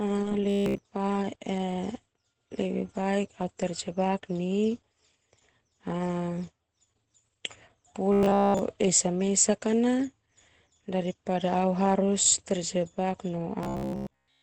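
The whole clip sounds muffled and hoarse with nothing above 8 kHz, likely Opus compression dropping into its speech mode at a low rate, around 12 kbps. At 0.50–0.80 s, 8.13–8.59 s and 13.63 s to the end, there's a rigid metallic buzz near 67 Hz, likely robotic sound from repeated short buffers of about 15 ms looping while the real audio is skipped.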